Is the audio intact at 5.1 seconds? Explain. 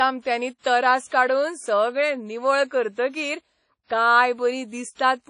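No. The whole clip, including 5.1 seconds, carries damage from likely WMA compression. Nothing remains above 10.1 kHz. Coarse transform coding smears quantisation noise over long blocks. The speech sounds ringing and washy, with breathing hiss, which fits a bitrate near 32 kbps.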